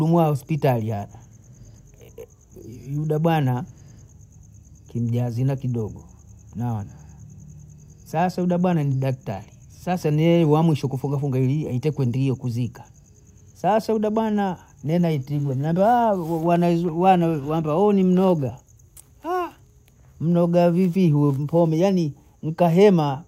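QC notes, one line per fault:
Nothing to flag on this speech clip, as far as anyone listening can tell.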